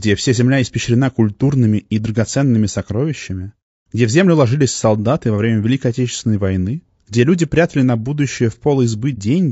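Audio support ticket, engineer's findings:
Speech rough and grainy throughout, noise filling the gaps between harmonics, top band dull and synthetic-sounding. Plainly audible codec damage. Likely low-delay AAC compression (AAC-ELD): short frames resolve pitch harmonics poorly, and the damage fits a starved bitrate around 32 kbps.

Brief soft dropout, 9.15 to 9.18 s, about 30 ms, edges fading out and back in. AAC frame loss with muting: the decoder zeroed the missing spectrum and overlapping windows smoothed the gap, consistent with a single lost frame.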